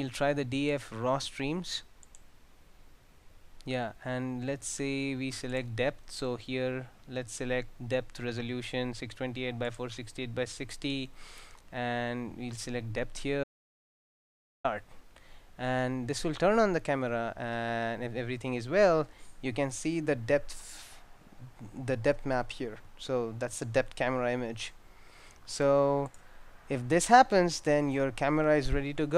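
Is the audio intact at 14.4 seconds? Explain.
No. At 14.4 seconds the clip is in the middle of an audio dropout to silence that runs from 13.44 to 14.64 s, so about 1.2 s of sound is simply missing. The input was likely lost for that moment while recording carried on writing zeros. The sound stops abruptly mid-flow and resumes just as abruptly. Unlike a natural pause or a noise gate, the gap holds silence with no room tone or background at all.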